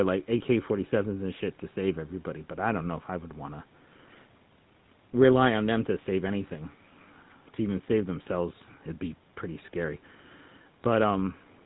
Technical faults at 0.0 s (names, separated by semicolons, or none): GSM full-rate codec